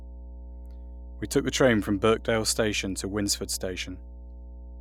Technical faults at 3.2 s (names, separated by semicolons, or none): mains hum